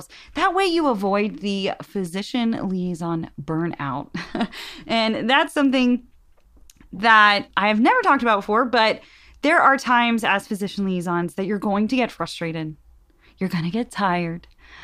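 No technical faults are audible.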